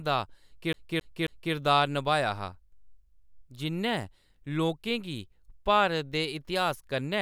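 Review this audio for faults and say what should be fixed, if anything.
From 0.73 to 1.54 s the speech has a CD stuck on one turn. A scratch throws the laser back to the same spot on each rotation, so a 0.27 s slice plays three times, each pass broken by a short mute, before "नभाया हा" arrives. A waveform shows the identical block repeated with tiny gaps, and a spectrogram shows one pattern stamped three times between thin vertical silences. Re-ripping from a cleaned disc with error-correcting software would prevent it.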